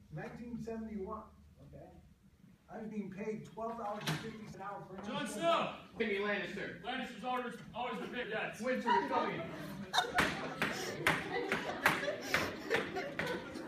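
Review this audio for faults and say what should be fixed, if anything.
Jumps forward in the sound occur at 2.90, 4.53, 5.99, 8.22, 10.17, 11.68 and 13.54 s. These are compressed frames skipped. Whole frames fail to decode, so playback leaps ahead by roughly 70 ms to half a second in steps consistent with a 23.2 ms frame. Re-encoding from an intact source and checking the file's frame integrity before delivery would prevent this.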